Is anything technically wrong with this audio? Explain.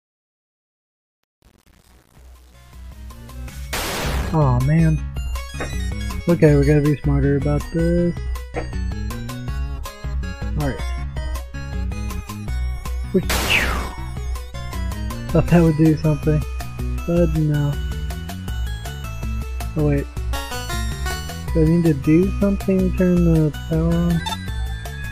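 Yes. From 0.0 to 4.03 s, across the fade-in, there is truncation distortion on a fade. It is worst up to 3.77 s. The gain stage discards low-order bits without dither, which fits an effective 8-bit resolution. At the lowest levels the waveform collapses into a few coarse square steps. The quiet start sounds gritty. Dithered low-bit audio would give a steady hiss instead, and the grit here tracks the signal.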